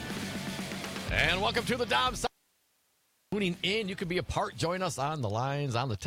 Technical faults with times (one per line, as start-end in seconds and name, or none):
2.27-3.32 audio dropout to a faint residue